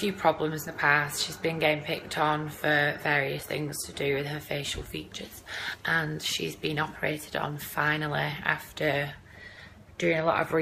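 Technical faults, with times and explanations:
0.67–0.72 s, 3.39–3.42 s, 5.73–5.78 s: compressed frames skipped. Whole frames of the encoded stream are missing or rejected by the decoder, so playback jumps forward. The sizes fit 20 ms frames: roughly 70 ms, 40 ms, then about 0.3 s lost.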